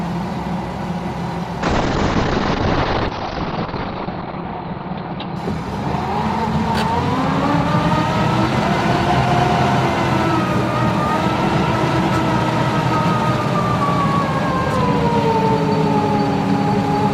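From 1.63 s to 7.17 s there is a call bitrate drop: the connection's bandwidth estimate collapsed, so the encoder was pushed from a comfortable rate down to one that fits roughly 8 kbps. Coding becomes coarse and the top end is discarded, with the audible bandwidth shrinking from 20 kHz to about 6 kHz. The sound turns muffled and watery, at its worst for about 2.2 s, before detail returns.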